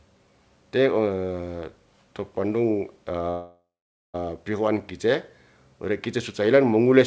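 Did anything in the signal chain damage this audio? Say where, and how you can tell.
Yes. At the network and jitter-buffer stage, the stream stalls, heard as a call audio freeze from 3.30 to 4.16 s, right after "to pondung". The likely cause is packets held up in transit, so the jitter buffer ran dry and the receiver kept extending the last sound. That fill lasts 0.84 s and decays into about 480 ms of silence. The sound then picks up exactly where it stopped, with nothing lost, so everything after it plays 0.84 s late.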